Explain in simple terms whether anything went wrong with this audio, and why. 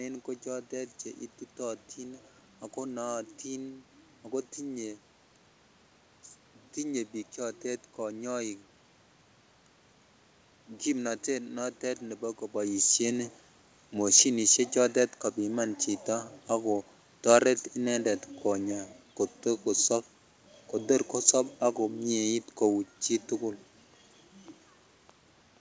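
Nothing went wrong with this audio; the room noise and the voice getting softer or louder about halfway through and again near the end are just the talker moving and the room itself, not faults.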